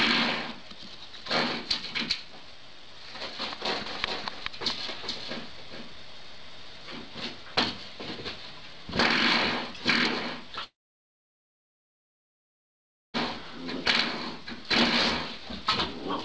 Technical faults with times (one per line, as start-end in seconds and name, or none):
3.86-6.70 doubled audio track
10.64-13.16 long network dropout